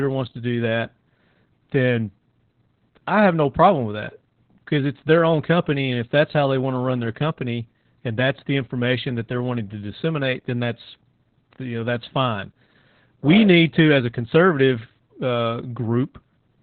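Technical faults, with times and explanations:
Throughout: Opus voice compression. The speech sounds muffled and boxy, with a hoarse, slightly robotic buzz in the voiced sounds and nothing audible above about 4.3 kHz, so sibilants lose their hiss. The heavy damage points to Opus running its SILK speech coder in narrowband mode at a very low rate, around 8 kbps. At that rate the band is cut to 4 kHz, and the excitation that drives the prediction filter is coded too crudely to sound natural.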